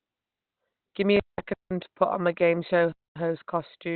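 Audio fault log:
throughout: Opus compression. The speech sounds muffled and hoarse, with nothing above about 4.2 kHz. The narrow band cuts the crisp upper detail of consonants. The roughness is plainly audible throughout. This is likely Opus running in its speech (SILK) mode at a narrowband setting. A low rate near 16 kbps would fit. At that rate the encoder models the voice coarsely and throws away the upper spectrum.
1.17 to 1.40 s: intermittent contact. The sound drops out for about 184 ms just before "to put on my". Crackle marks each edge of the dropout. Faint hiss stays while the line is open. A loose plug or cable lost its connection briefly and then remade it. The crackle comes from the contact scraping as it breaks and closes.
1.54 to 1.71 s and 2.92 to 3.16 s: block of digital silence. Both are hard holes. The first lasts about 171 ms and comes just before "to put on my". That length fits an 8192-sample buffer. 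The second lasts about 236 ms, right after "on my game show". Zeros replaced the samples, probably because the output buffer was not filled in time. There is no fade, so the waveform jumps at each edge.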